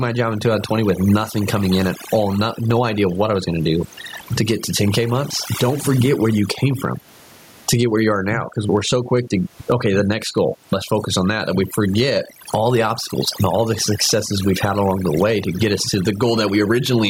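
Throughout the speech, the background falls to near silence dotted with twinkling specks: overdone noise removal, switching off individual frequency bands it mistakes for noise. Also throughout, the gain is pulled down by about 20 dB under loud syllables, a squashed gain pumping, likely from excessive input gain driving a fast limiter. The room noise stays about 45 dB below the speech.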